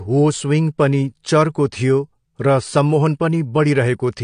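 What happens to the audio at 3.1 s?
AAC compression damage is present at 3.1 s, as it is throughout the clip. The likely cause is low-bitrate AAC-LC coding, consistent with around 32 kbps, which removes everything above 9.7 kHz and coarsely quantises what remains, leaving the speech dull, smeared and plainly fizzy.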